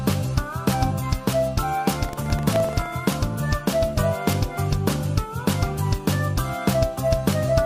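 From 2.01 to 2.87 s, the writer and the hardware reader of the ring buffer slip and cross inside each period, producing buffer tearing. A small slice of every buffer replays audio about a tenth of a second old, hard-joined on both sides, giving a rattling buzz near 23.4 Hz, which fits a 2048-sample buffer.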